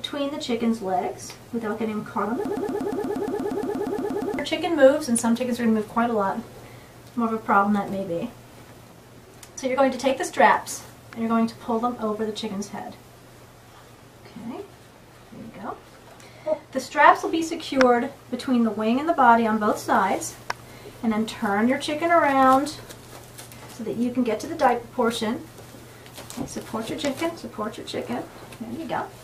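From 2.45 s to 4.39 s the audio falls into a broken-record loop. A fragment about 118 ms long repeats exactly, back to back, 16 times. Whatever should have played there is lost. The likely cause is a stalled player, encoder or stream resending its last buffer.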